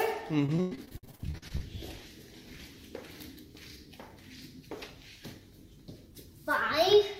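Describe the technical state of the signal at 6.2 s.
Nothing is wrong with the signal at 6.2 s: no dropout, distortion, glitch or other technical fault is audible at that point.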